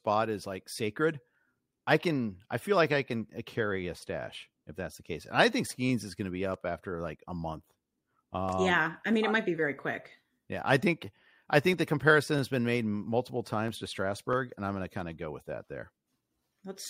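From 0.7 s to 16.28 s a click recurs every 0.649 s across the speech, about thirty in all. These are likely clock drift buffer slips: two independent clocks disagreeing by roughly 500 ppm, so a buffer periodically drops or repeats a block of around 15 samples.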